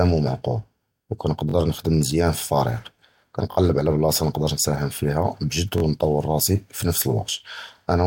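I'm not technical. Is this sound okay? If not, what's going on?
No. There is a repeated buffer fault at 1.49, 3.52 and 5.78 seconds. Each time, the next slice of speech arrived late, so the playback device played the slice it already had, about 21 milliseconds long, twice more before moving on. That repetition fits a 1024-sample buffer. You hear a brief stutter or buzzy hiccup lasting about 43 milliseconds, with hard joins, though almost no speech goes missing.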